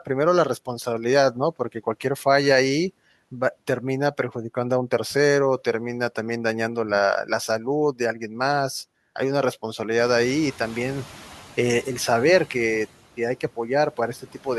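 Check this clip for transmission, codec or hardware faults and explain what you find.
Two faults show up, both from the noise suppressor rather than the transmission path or the hardware.

From 9.98 to 11.04 s there is a noise suppressor catching up. The room noise jumps by about 16 dB at around 10 s, and the suppressor's noise estimate still reflects the quieter background. For about 1.06 s it removes too little, so the louder noise comes through with less reduction. The noise then sinks by about 4 dB as the estimate adapts, settling about 22 dB below the speech.

Between 14.19 and 14.46 s there is speech cut by the noise suppressor. The suppressor mistakes part of the speech for background and attenuates it along with the noise, pulling the level down by as much as about 11 dB. The affected portions add up to roughly a tenth of a second. They sound swallowed and faint, as if the talker briefly dropped away from the microphone.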